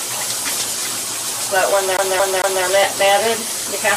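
From 1.97 s to 2.64 s the audio locks into a fast, even stutter: the same fragment of about 0.23 s plays three times in a row, with a brief drop-out at each jump back. This is a CD stuck on one turn. A scratch knocks the laser back one track at the same point on each rotation of the disc, so the player keeps rereading that short stretch before it finally moves on.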